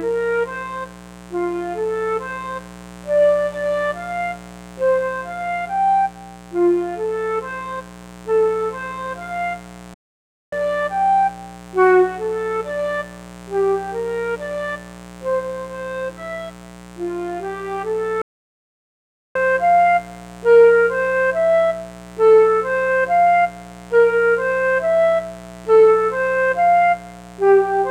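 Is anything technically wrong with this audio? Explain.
Yes, there are two kinds of fault. A mains buzz runs throughout: switching spikes from a dimmer, rectifier or unshielded path ride on the 60 Hz supply, twice per cycle, spraying harmonics up into the kilohertz range. The result is a steady, raspy buzz sitting roughly 20 dB under the sound.

There are two playback stalls, from 9.94 to 10.53 s (about 0.58 s) and from 18.22 to 19.36 s (about 1.14 s). The sound cuts off mid-flow and goes silent, then resumes, likely because the player's buffer ran dry or its thread was blocked until it recovered.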